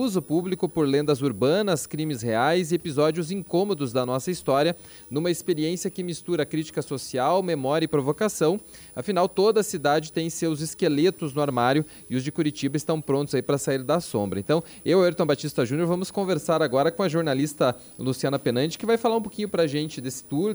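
From start to finish a switching supply whistle sits on top of the sound: a thin, high tone around 10 kHz, wandering between about 9.7 and 10.6 kHz, roughly 25 dB below the programme. A switch-mode power supply in the chain is cycling at an audible rate, or beating against another converter, and its pitch shifts as the load it feeds changes.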